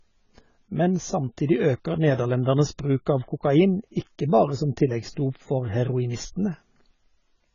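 Speech that sounds dull and smeared from start to finish, with nothing audible above 7 kHz, a watery warble on held vowels and a fizzy, grainy edge on sibilants. The likely cause is heavy AAC compression: an AAC-LC encoder short of bits has lowered its cut-off, left gaps in the spectrum and coarsely quantised what remains, a degree of damage that fits a very low bitrate of around 16 kbps.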